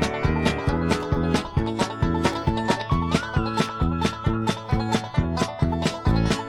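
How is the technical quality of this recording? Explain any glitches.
The technical quality of this recording holds up, and there are no glitches to explain.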